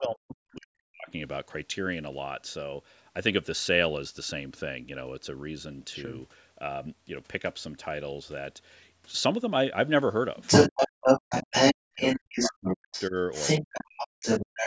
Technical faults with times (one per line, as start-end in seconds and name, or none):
0.00-1.11 speech suppressed in double talk
0.02-0.53 other side's voice leaking through
10.36-14.66 other side's voice leaking through
10.70-13.15 speech suppressed in double talk
13.60-14.66 speech suppressed in double talk